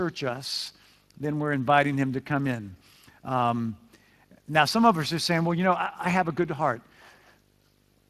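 Video or display buzz runs through the whole clip: a screen or video cable is coupling into the audio, leaving a 50 Hz field-rate buzz with hash above it and a thin 15.6 kHz line-rate whine, all sitting roughly 35 dB below the speech.

Speex codec damage is also present throughout and plainly audible. This CELP speech codec spends too few bits on the excitation, so the speech sounds noisy and hoarse, in a way that fits a mid-range setting near 22 kbps. The codec's band stops at about 15.3 kHz.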